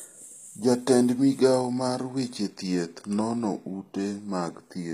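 A speech clip that most likely passed through HE-AAC compression at a low bitrate, around 24 kbps, throughout. The treble is rebuilt from copied lower bands rather than coded, so s sounds turn gritty and metallic, and nothing sounds above 15.5 kHz.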